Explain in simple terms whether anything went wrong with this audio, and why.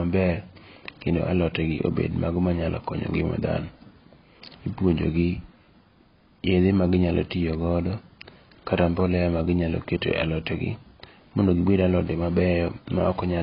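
Something went wrong, from start to finish. The speech sounds dull and muffled, with nothing above 5.3 kHz. S sounds turn fizzy and smeared. The likely cause is heavy AAC compression, which throws away detail to make the file smaller.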